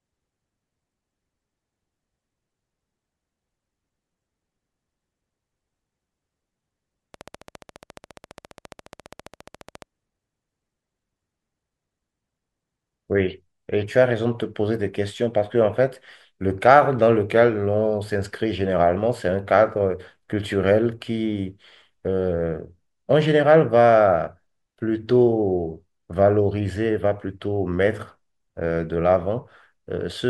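Something in the chain, likely interference from nearby equipment or a faulty connection or power supply, injects a train of clicks into this speech clip from 7.14 to 9.83 s: around forty evenly spaced pulses at 14.6 per second, ticking over the speech at roughly its level.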